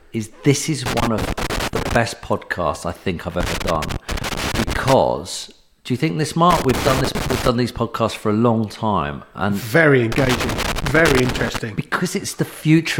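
Irregular bursts of crackle and scratching chop the sound at 0.86 to 1.96 s, 3.40 to 4.93 s, 6.51 to 7.48 s and 10.12 to 11.58 s. This is loose connector crackle: a worn or dirty contact rapidly making and breaking as it shifts, interrupting the signal in jagged fragments.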